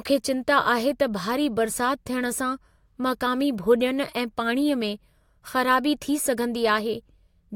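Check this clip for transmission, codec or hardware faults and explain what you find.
Nothing in the transmission chain, codec or playback hardware audibly disturbs the speech; the signal stays continuous and stable throughout.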